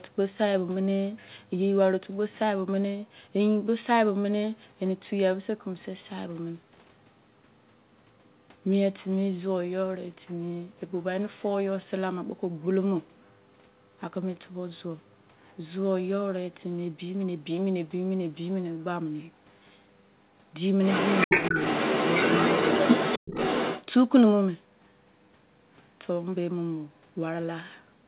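From 20.84 to 23.86 s, the other side's voice leaks through at roughly the talker's own level, likely residual loudspeaker echo the echo canceller missed. Around 21.27 to 21.55 s, the talker's speech is briefly suppressed in double talk, dipping sharply for about a tenth of a second, likely the canceller ducking both voices.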